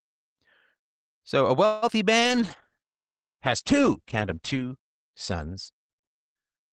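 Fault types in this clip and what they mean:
call audio freeze: from 1.65 to 1.84 s the sound stalls and is stretched into a fading buzz for about 0.17 s, likely from packets held up in transit, then resumes with nothing lost.
short concealed packet loss: at 1.88 and 1.93 s brief gaps of about 20 ms are patched by extending the preceding sound, heard as quick smears or wobbles.
call bitrate drop: from 2.21 s the encoder falls from 32 to 9 kbps, bandwidth narrows from 20 kHz to 8 kHz, and the sound turns muffled and rough to the end.
jitter buffer slow-down: between 2.36 and 2.82 s repeated pitch periods add about 39 ms, so the sound runs at 93% speed, drawn out at unchanged pitch.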